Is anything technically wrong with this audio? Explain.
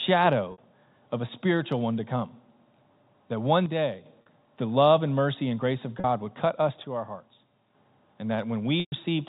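Yes. Two faults recur in this speech, heard through G.711 telephone coding that cuts everything above 4 kHz, as that format should.

Packet loss with pitch repetition occurs four times: at 0.52 s (60 ms), 4.22 s (40 ms), 6.00 s (40 ms) and 8.80 s (120 ms). The gaps fit runs of 20 ms packets going missing. The receiver fills each hole by repeating the last pitch period, fading it over about 50 ms. The three shorter gaps sound like a brief, buzzy held tone. The 120 ms gap fades to silence. Speech then returns with a short cross-fade.

One channel drops out twice, from 3.66 to 4.06 s and from 6.84 to 7.74 s. The level falls suddenly by about 6 dB and comes back just as abruptly. This is most likely a stereo channel vanishing before the mono sum. The material shared by both channels keeps only half its contribution. Anything carried only in the lost channel disappears for those stretches.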